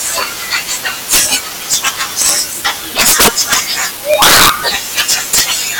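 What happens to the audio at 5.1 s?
Integer overflow from 5.00 to 5.41 s: peaks driven about 6 dB past the limit wrap to the opposite sign, giving violent cracks far harsher than clipping's flattening.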